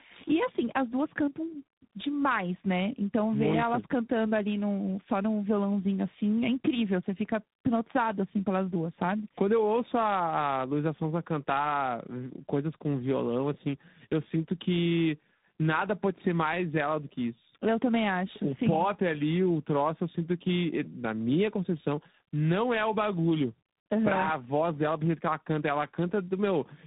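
Throughout the speech, tandem speech coding is audible. The call was decoded and re-encoded at each network border, passing from G.729A into G.726 by way of G.711, so the second coder compounded the first one's errors. The result is rough, warbly, muffled speech with nothing above 3.8 kHz.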